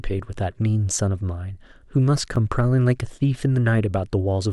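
At 2.36 s a repeated buffer: late audio made one 11.6 ms chunk play twice, heard as a click, with a duplicated waveform segment and a hard seam.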